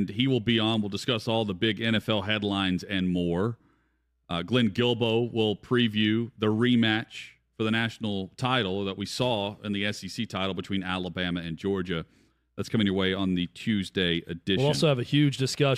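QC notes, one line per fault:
No technical faults turn up anywhere in the recording: level, continuity and signal path all hold steady across the whole of the speech.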